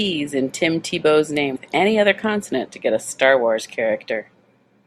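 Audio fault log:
1.53–1.57 s, damaged data in a compressed stream: a brief glitch breaks into the speech. Corrupted bytes made the decoder misread those frames and lose sync, so it skipped forward to the next valid frame header.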